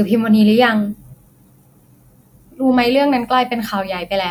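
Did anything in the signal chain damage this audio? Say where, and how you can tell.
No, no fault is audible.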